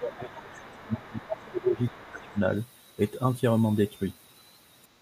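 From the very start to 2.45 s the speech is caught in double-talk suppression: across roughly two seconds of that span the level sinks in uneven dips, the deepest about 20 dB down. This is likely an echo canceller turning down everything it could not sort into near talker versus loudspeaker echo.

That second voice is the other side's voice leaking through, at 0.17 to 1.52 s and again at 1.75 to 2.39 s, sitting about 25 dB under the speech. The far-end audio was likely played from the device's loudspeaker and not fully cancelled from the microphone. Unlike room reverb or the talker's own echo, it is a different voice, not a delayed smear of the main speech, and it arrives faint in two separate stretches.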